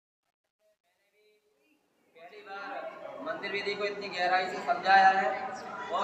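Undithered word-length loss, fitting 11 bits, causes truncation distortion on the fade-in from 0.0 to 3.62 s: gritty steps, worst until 2.34 s.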